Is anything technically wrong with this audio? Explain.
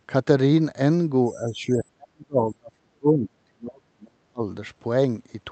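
Yes. From 1.33 to 4.44 s the speech is suppressed in double talk. The voice sinks by up to about 40 dB, with roughly three seconds affected. Likely, an echo canceller heard both sides at once, mistook the talker for echo and turned everything down.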